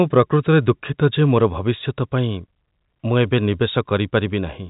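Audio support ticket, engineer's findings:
Engineer's findings: no fault found in the speech.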